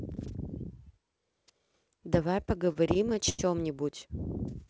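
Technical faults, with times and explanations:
2.42–3.40 s repeated stalls (stutter): late packets kept draining the jitter buffer, so the receiver stretched the last sound through gaps up to 90 ms, making it drag and stutter.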